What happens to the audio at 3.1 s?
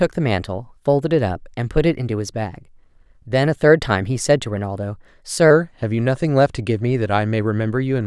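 At 3.1 s the speech runs slightly fast and sits about 1.5 semitones high, part of a wrong sample rate fault from 0.0 to 5.51 s. The samples are played about 1.09 times faster than recorded, with no conversion, which fits 22 kHz audio played back at 24 kHz.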